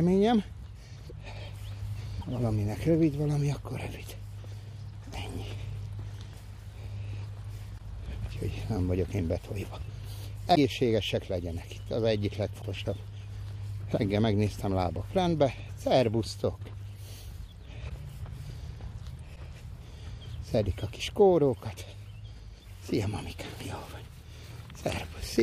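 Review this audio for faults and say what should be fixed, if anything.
Short glitches of about 30 ms, roughly one 26 ms frame each, occur at 1.09–1.12, 2.21–2.24, 7.77–7.80, 10.54–10.57, 12.61–12.64, 17.88–17.91 and 19.35–19.38 s. Each is a brief chirp, noise burst or dropout where the audio skips ahead. The likely cause is a broken MP3 bit reservoir: after frames went missing, the next frame reached back for borrowed data and decoded bytes belonging to another frame. On a spectrogram each appears as a narrow vertical band of broadband smear or a sudden blank slice. In the waveform it shows as a jagged spike or a flat gap with a discontinuity on either side. To prevent this, keep MP3 streams intact through transmission and editing, and cut only at frame boundaries with reservoir-aware tools.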